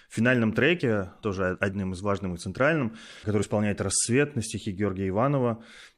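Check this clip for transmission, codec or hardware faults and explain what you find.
Two brief codec faults are present in the speech. Both are damaged data in a compressed stream. The first is at 0.79 s, just before "тоже одним из важным". The second runs from 3.42 to 3.44 s, just after "важным и центральным который". Corrupted bytes made the decoder misread frames and resync, giving a short glitch.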